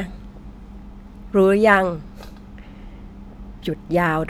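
No technical faults are audible.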